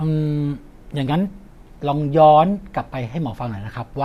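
Nothing in this short bit of speech stands out as a technical fault, so there's nothing here to flag.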